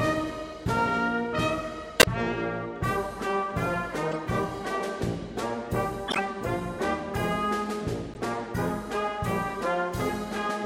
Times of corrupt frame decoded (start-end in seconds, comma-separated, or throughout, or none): 1.99-2.05, 4.11-4.16, 6.07-6.19, 8.14-8.18